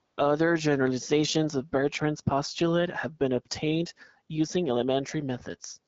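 From 0.05 to 0.17 s, the phone's voice activity detection treated the opening of this speech clip as silence and stopped sending speech frames for about 120 ms, a case of AMR comfort noise. The receiver filled that gap with synthetic noise built from a rough estimate of background level and spectrum, so the real ambience gives way to a smooth, even hiss that switches in and then out again before the wideband-coded speech, carrying only light codec coloration, takes over.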